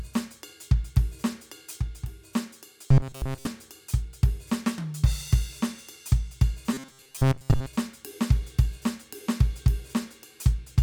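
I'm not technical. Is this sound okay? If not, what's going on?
No. Twice, from 2.88 to 3.47 s and from 6.73 to 7.66 s, the music takes on robotic sound from repeated short buffers. The likely cause is fresh audio arriving too slowly, so the player keeps replaying its last sliver of sound, about 7.5 ms long, and skips most of the real music. That constant looping forces a rigid, metallic buzz at 133 Hz onto the music, which only loosely follows what should be playing.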